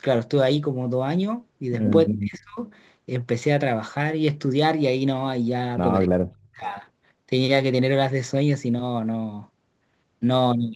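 A faint roughness rides on the speech throughout, grainier on loud and bright syllables and gone in the pauses. That is sample clock jitter: the converter's clock wanders by a few microseconds, so each sample lands slightly off time, leaving an error roughly 40 dB below the signal.

From 2.08 to 2.59 s the speech sinks abruptly, dropping by around 35 dB at its deepest before recovering. This is speech suppressed in double talk, likely from the echo canceller clamping down while the far side spoke over this talker and attenuating the near-end voice along with the echo.

Just after, from 2.68 to 2.73 s, a brief, faint ghost of the earlier speech appears, very quiet next to the main voice. This is echo leak, likely from a loudspeaker on the far end whose canceller let some residue through, returning it 274 ms late.

The same pattern recurs. From 6.07 to 6.62 s the speech again dips sharply, by around 35 dB, as suppression in double talk pushes it down. 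From 6.65 to 6.73 s a slightly stronger scrap of echo follows at the same 274 ms delay. Nothing is heard above 8 kHz, consistent with the Opus call path.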